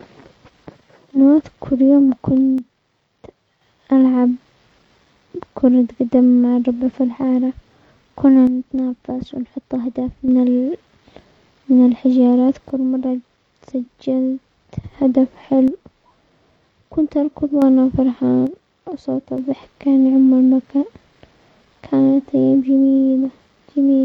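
The speech drops abruptly by about 6 dB five times: 2.58–3.61 s (right after "هالوقت كل يوم"), 8.47–10.28 s, 12.70–14.83 s (after "من الحجارات"), 15.68–17.62 s and 18.47–19.38 s. That's likely one channel dropping out, halving the mono sum before snapping back.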